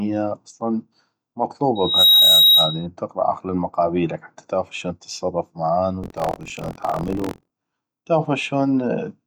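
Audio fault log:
1.75 to 2.86 s, loudspeaker feedback squeal: a pure tone at 3.8 kHz rises out of the speech, swelling over roughly a third of a second until it sits about 10 dB above the voice, then holds as a piercing squeal until it stops. A microphone is hearing the loudspeaker it drives. At that one frequency the loop returns more than it receives, so each pass through the loop reinforces the tone until something limits it.
6.01 to 7.51 s, buffer tearing: the speech takes on a robotic, rattling buzz at 43.1 Hz, which fits a 1024-sample buffer. The software filling the ring buffer and the hardware reading it have drifted out of step and now cross partway through every period. In each cycle a small slice, around 15 percent, replays audio from roughly 50 ms earlier, and it is butted against the current sound with abrupt joins at both edges.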